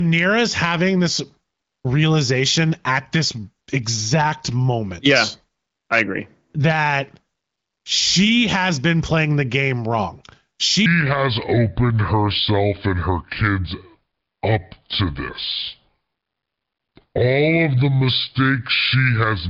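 From 10.86 s to the end, the speech plays in a section at the wrong speed, slowed to 0.689 times its recorded rate. Pitch falls with it, by roughly seven semitones, so the speech turns deep and dragging. The likely cause is an editor or player running against a mismatched clock.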